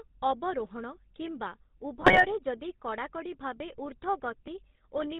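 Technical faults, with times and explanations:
Throughout, GSM full-rate codec. The speech passes through the 13 kbps GSM coder, which models the vocal tract and excites it with sparse, regularly spaced pulses. Nothing above 4 kHz survives. The result is a plainly audible buzzy, gravelly roughness.
2.00 to 2.25 s, GSM bit errors. Between "ଅବରୋହଣ କିମ୍ବା" and "ଯଦି କଡ଼ାକଡ଼ି", corrupted bits reach the decoder at about a 2.8 percent error rate. Damaged filter, pitch and gain values distort several consecutive frames. The speech briefly squawks and gargles.
3.60 s, dropped buffer (overrun). Just after "ଯଦି କଡ଼ାକଡ଼ି", the sound jumps ahead with no gap. Roughly 7 ms of audio is missing. The likely cause is samples overwritten before the program collected them, leaving the two sides spliced directly.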